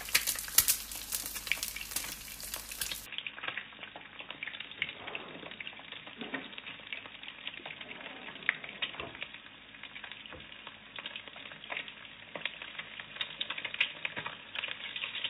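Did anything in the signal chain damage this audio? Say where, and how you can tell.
Yes. From 3.06 s to the end the sound turns dull and narrow, with nothing above 3.8 kHz, a level drop of around 5 dB and a new, faint noise floor, with no gap at the change. That's likely the input switched to a poorer device at the driver stage.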